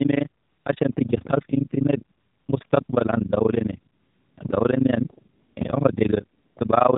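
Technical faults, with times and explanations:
Throughout: overlap-add ripple. The signal was split into windowed frames and rejoined with an overlap whose windows do not add up to a steady gain, so the level swings once per frame. Here the swing is deep, about 60 dB between peaks and troughs, at a frame rate of around 30 Hz. The speech therefore carries a hard, rapid flutter, a rough mechanical tremolo chopping through every syllable rather than a gentle wobble.
Throughout: AMR narrowband mobile codec. The speech has passed through the AMR-NB phone codec, which samples at 8 kHz and rebuilds the voice from a vocal-tract model excited by a small number of pulses per subframe. Nothing above 4 kHz survives, so sibilants and brightness are gone. The damage is plainly audible: a buzzy, synthetic timbre that fits one of the lower bit-rate modes, around 7.4 kbps.
0.42 to 0.66 s, 2.18 to 2.48 s, 2.66 to 2.70 s, 2.84 to 2.88 s, 3.94 to 4.38 s, 5.34 to 5.56 s (right after "le niyene") and 6.38 to 6.56 s: AMR comfort noise. 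The sending side decided the talker had gone quiet and stopped transmitting speech frames, and the receiver filled each gap with generated noise. The gaps last 240, 300, 40, 40, 440, 220 and 180 ms. The actual background drops out, a smooth, even hiss takes its place, and this noise switches in and out abruptly at the edges of each gap.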